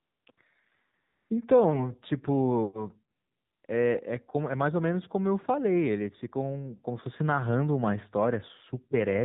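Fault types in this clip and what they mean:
AMR narrowband mobile codec: The speech was carried over a 2G/3G-style AMR-NB link at 7.4 kbps, sampled at 8 kHz and rebuilt from a vocal-tract model excited by a handful of pulses per 5 ms subframe. At this low rate the damage is plainly audible: everything above 4 kHz is gone, leaving a muffled telephone band, and the voice takes on a buzzy, synthetic edge throughout the whole clip.
AMR comfort noise: The sending side decided no one was talking and stopped transmitting speech frames, so the receiver filled the gaps with generated noise shaped only by a rough level and spectrum. Here that happens at the start up to 0.26 s, briefly from 0.32 to 0.38 s, from 1.02 to 1.30 s, and from 3.16 to 3.64 s, with a 20 ms blip at 3.66 s. The real background gives way to a smooth, steady hiss that switches in and out.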